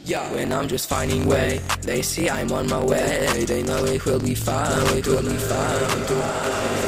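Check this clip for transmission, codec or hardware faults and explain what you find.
Two faults here: a block-size problem running the whole way through, and a doubled track near the end.

Block size mismatch (truncated): Throughout the clip there's a steady buzz at about 46.9 Hz. One stage writes longer blocks than the next reads, so each block's tail gets chopped. That fits a 1024-sample read size. Everything plays 1.12 times fast but at roughly normal pitch.

Doubled audio track: From 4.69 s to the end, a second full-band copy of the audio trails the original by about a second, at much the same level. It cuts in abruptly, with no decay or room colour. Most likely a slower capture path picked the signal up twice, or an edit left two copies out of step.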